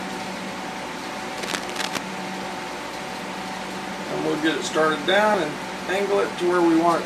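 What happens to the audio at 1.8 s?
At 1.8 s you're in the middle of a burst of cable scratch noise running from about 1.37 to 2.01 s: dense, ragged scratching and rustling sitting only around 5 dB under the sound. That's likely a worn cable or connector being moved, its contact resistance flickering rapidly.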